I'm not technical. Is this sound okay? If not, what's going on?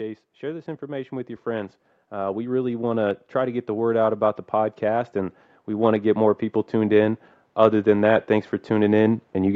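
No. From about 0.4 seconds right through to the end, the speech slowly gets louder, and the background noise swells up along with it, as if someone were gently turning a volume knob up the whole time. This is automatic gain rising: the automatic gain control judged the input too quiet and kept raising its own volume step by step, lifting everything it picked up, wanted or not.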